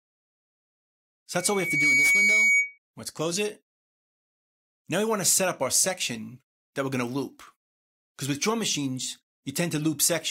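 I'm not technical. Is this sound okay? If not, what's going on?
No. From 1.34 to 2.78 s there is a loudspeaker feedback squeal: a microphone picks up its own loudspeaker and loops, so a single high tone near 2.2 kHz swells over about half a second into a loud whistle. Unlike a steady interference whine, it grows by itself.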